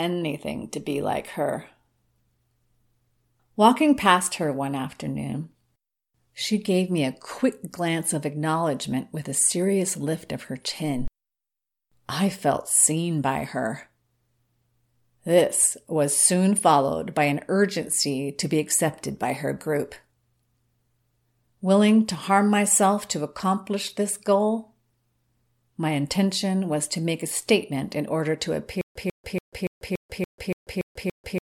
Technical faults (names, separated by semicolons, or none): stutter with silent gaps